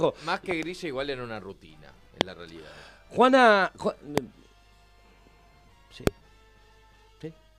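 Loud pops occur at 0.51 to 0.65 s (a quick double), 2.21 to 2.23 s, 4.18 to 4.20 s and 6.07 to 6.09 s, peaking roughly 10 to 25 dB above the audio, which continues beneath them. They are likely voltage spikes from static, switching or a driver glitch.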